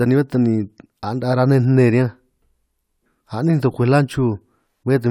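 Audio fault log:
No faults heard anywhere in the speech.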